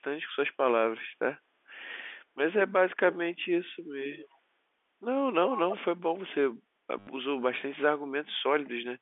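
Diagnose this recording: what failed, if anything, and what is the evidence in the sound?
Call processing, echo leak: from 4.13 to 4.38 s a faint copy of the speech returns about 0.32 s after the original, roughly 20 dB below it and confined to the same 250 Hz to 3.5 kHz telephone band as the G.711 path. The likely cause is a far-end loudspeaker whose echo canceller let part of its microphone pickup through. What separates this from a network repeat is the delay and the content: it is a delayed replay of earlier speech, with no clicking seams.

Network, packet loss with last packet repeated: from 6.99 to 7.07 s, 80 ms of audio is replaced by the same short fragment played over and over. The restarts seldom line up with the pitch of the voice, and the run buzzes at about 100 Hz, which fits 10 ms packets. This is a brief robotic stutter at a rigid mechanical rate rather than a delayed copy of the speech, which rules out echo.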